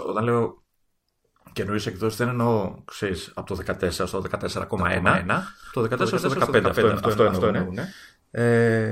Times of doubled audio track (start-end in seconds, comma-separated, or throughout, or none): 4.78-7.92